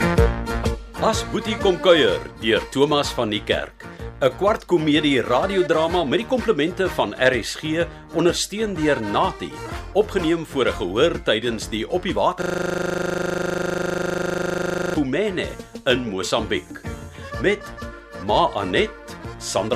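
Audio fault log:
12.42–14.96 s, system hang loop: For about 2.5 s the same 40 ms fragment of audio repeats exactly, some sixty times, giving a hard rattling buzz at 25 Hz in place of the sound. The playback system froze while the audio hardware kept cycling one small buffer. Unlike an underrun stutter, which leaves silent gaps and moves forward through the material, nothing here advances or drops out. Identical audio recurs until the loop breaks.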